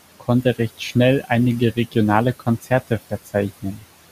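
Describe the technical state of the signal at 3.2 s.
At 3.2 s the speech is being cut by the noise suppressor. The span runs from 3.1 to 3.35 s. The suppressor mistakes part of the speech for noise and turns it down with the background, by about 14 dB at the deepest point. Roughly a tenth of a second is affected. That part sounds swallowed and faint.

Noise suppressor artifacts are also present at this moment. The suppressor removes about 17 dB of steady noise, band by band, frame by frame. The leftover room noise, which sits about 18 dB below the speech, sinks between the words and rises under them.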